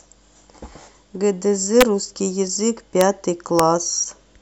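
Three sharp, violent cracks break through the speech at 1.81 s, 3.01 s and 3.59 s. Each is a brief, harsh snap, far more abrupt than ordinary clipping. This is integer overflow. On those loud peaks, the signal went only about 1 dB past the largest representable value, and barely over it at 3.01 s. Instead of being held at the ceiling, the sample wrapped around to the opposite extreme, jumping across the full range in an instant.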